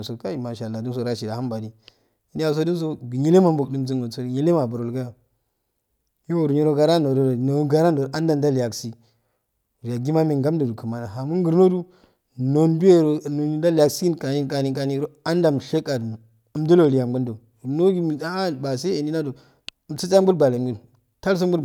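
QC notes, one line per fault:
Nothing to flag here; I listened all the way through this speech recording and didn't hear a single problem worth noting.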